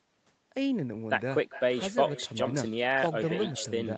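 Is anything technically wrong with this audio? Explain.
Yes. Echo with no canceller runs throughout the clip. The far end appears to be playing the call over a loudspeaker, and its microphone picks that playback up and sends it back with nothing removing it. Each phrase of speech returns after a round trip of roughly 0.4 s, about 15 dB quieter than the original. It sounds like a thinner shadow trailing the talker. The missing content above 8 kHz fits ordinary call microphone processing.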